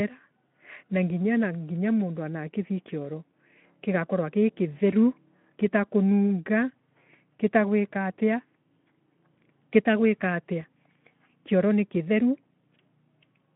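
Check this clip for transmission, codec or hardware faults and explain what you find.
No transmission, codec or hardware faults can be heard in this speech clip. It comes through a Speex link whose sound fits a setting around 15 kbps, with the telephone-style band of about 150 Hz to 3.4 kHz, nothing above 3.8 kHz, and only light coding texture on the voice.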